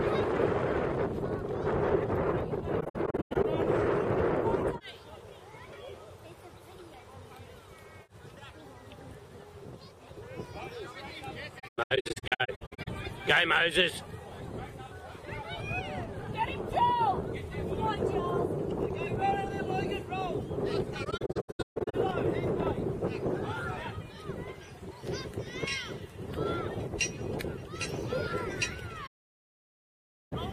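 Soft-edged holes break up the sound at 2.80–3.45 s, 11.59–12.88 s and 21.04–21.95 s, as scattered dropouts lasting up to about 0.15 s, then an almost solid gap from 29.06 to 30.33 s. This is AAC frame loss with muting: lost frames decode as silence, and the overlapping windows fade around each one.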